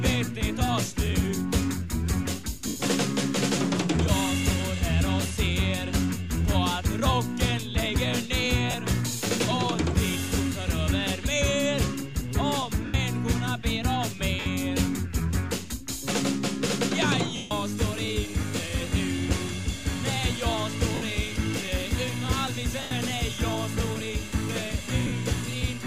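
At 2.67, 8.71, 12.86, 14.40, 17.36, 20.95, 22.82 and 25.07 s there are short dropouts of lost LE Audio frames, lasting 90, 30, 80, 60, 150, 70, 90 and 50 ms. The LC3 decoder fills each gap by repeating the last spectrum with scrambled signs, so tonal content smears into a brief noisy wash. In the longest gap at 17.36 s, that wash fades toward silence. The light codec coloring underneath is just ordinary lossy compression.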